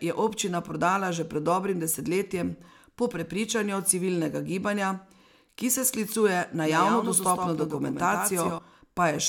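From 6.58 s to 8.58 s the speech is heard twice: a second, full-band copy trails the original by roughly 150 ms, somewhat quieter, about 5 dB down, and with no decay or room colour of its own. It snaps in and snaps out abruptly at those edges. This is a doubled audio track, likely from the same signal being captured again through a slower path, or an edit leaving two out-of-step copies mixed together.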